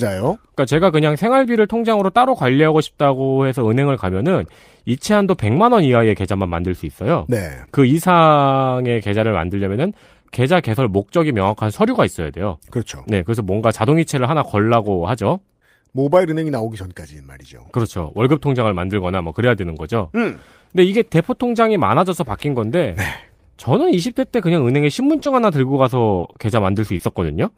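Near the end, brief smears and small wobbles break into the speech at 25.19 to 25.23 s and straight after at 25.23 to 25.27 s, then at 26.19 to 26.25 s, 26.33 to 26.37 s and 26.97 to 27.01 s. Each is short concealed packet loss: 20 to 40 ms of audio arrived too late to decode, so the receiver extended the preceding sound, voiced or noisy, across the hole and faded back into the real signal.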